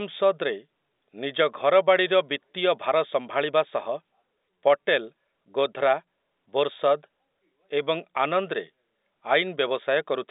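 Speech with no technical faults to report.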